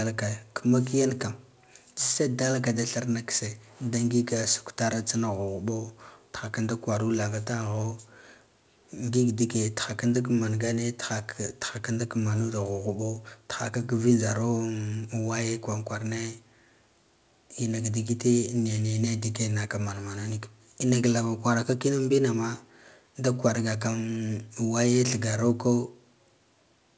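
Speech carried over a call path whose wideband coding leaves nothing above 8 kHz, consistent with G.722, and no technical faults can be heard anywhere in the recording.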